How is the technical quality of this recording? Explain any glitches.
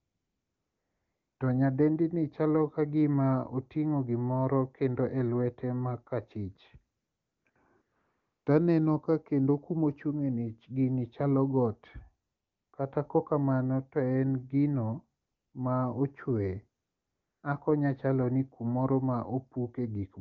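The recording has one recurring glitch, AMR comfort noise, which appears seven times while the wideband speech itself sounds clear, as expected of a high HD Voice rate. It occurs at 0.0–1.39 s, 6.97–7.45 s, 7.49–7.55 s, 7.81–8.45 s, 12.27–12.73 s, 15.21–15.53 s and 16.83–17.43 s. In each gap the phone stopped sending speech frames, so the receiver generated a smooth, steady hiss from a rough level and spectrum estimate. Unlike a noise gate, the pauses never fall silent. Instead, the real background is swapped for an artificial one that switches in and out at the gap edges.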